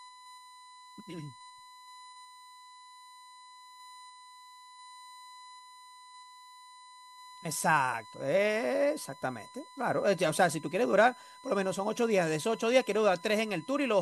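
Throughout the speech runs a USB whine, a steady 1 kHz tone about 25 dB below the speech, as current drawn in the bus's 1 ms frames leaks through power or ground. Its fixed high pitch distinguishes it from mains hum at 50 or 60 Hz.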